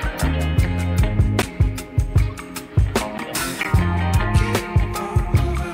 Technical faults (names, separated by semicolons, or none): corrupt frame decoded; block of digital silence